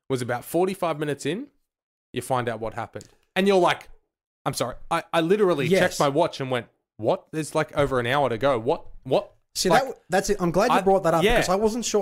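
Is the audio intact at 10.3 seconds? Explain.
Yes, at 10.3 seconds the audio plays through cleanly with no dropout, glitch or other fault to be heard.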